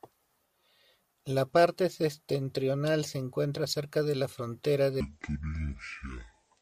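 A likely clock mismatch plays everything after "cerca de la frontera", from 5.00 s to the end, at 0.56 times speed. This section at the wrong speed sounds slow and dragging, about ten semitones lower.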